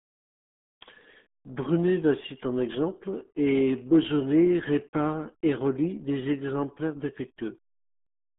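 RealAudio 14.4 codec damage runs through the whole clip: the speech is squeezed into roughly 150 Hz to 3.5 kHz, with nothing above 3.7 kHz, and heavy low-bitrate coding leaves it muffled and gargly, consistent with an 8 kbit/s dial-up-era speech codec.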